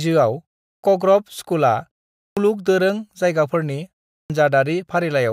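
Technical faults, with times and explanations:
0.69–0.83 s, 2.24–2.37 s and 4.16–4.30 s, clipped start after a pause: each time the speech comes back after a short gap (0.3, 0.41 and 0.31 s), the output device has dozed off and needs a moment to wake and lock again. It swallows roughly 144, 128 and 138 ms of onset, so the speech pops in abruptly without its first sounds. The pauses themselves just go quiet, which is expected.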